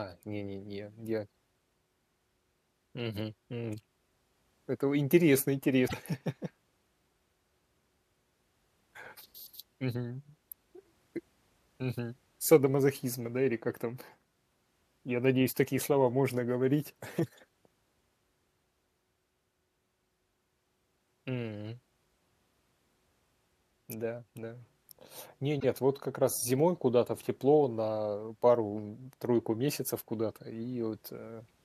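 At 5.84 s, right after "вы интересно", the speech breaks up for about 0.1 s. This is damaged data in a compressed stream. Some bytes in the encoded file were corrupted. The decoder misread those frames, lost sync and hunted for the next valid frame header. A second blip of the same kind runs from 25.56 to 25.64 s, just before "вот как раз зимой". Both are brief breaks in the audio.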